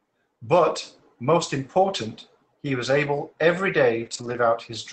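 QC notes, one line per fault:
4.05–4.35 s, lost packet rebuilt from error correction: eight separate packets went missing, but the decoder filled the holes with the low-bitrate backup copies carried in the following packets, so there's no dropout. Those roughly 160 ms of rebuilt audio just sound grainier and noisier than the surrounding 8 kHz-band Opus call audio.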